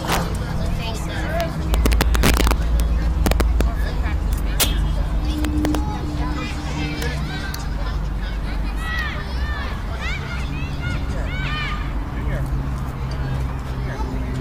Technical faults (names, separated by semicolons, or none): integer overflow